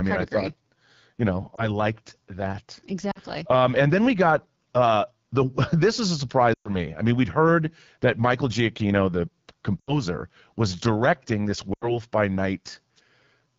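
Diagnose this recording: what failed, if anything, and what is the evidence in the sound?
Across the whole clip the speech sounds rough and raspy, with a buzzy edge and a hissy top band. This is the codec stage: AMR wideband (HD Voice) at a very low rate, which fits the 8.85 kbit/s mode. Too few bits describe the pulse excitation, and the band above 6.4 kHz is only synthesized noise.

Five brief dropouts break the flow: 1.55 to 1.71 s after "you know", 3.11 to 3.20 s, 6.53 to 6.75 s between "this is a" and "I mean we'd heard", 9.80 to 9.98 s, and 11.73 to 12.00 s after "was directing this". Each is a short dip or warble, the longer ones dropping to near silence, then the speech returns weak. These are lost AMR speech frames in the network stage. The decoder repeated its last good settings at falling gain. The longest gap, at 6.53 s, fits roughly six 20 ms frames missing.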